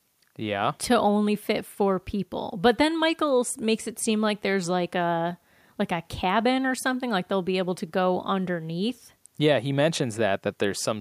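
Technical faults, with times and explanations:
No technical faults detected.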